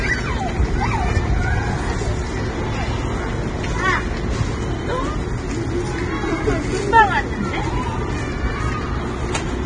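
Throughout, the sound is hissy and grainy, with nothing above about 9.7 kHz. This is likely Vorbis compression at a low bitrate, turning fine treble detail into noise.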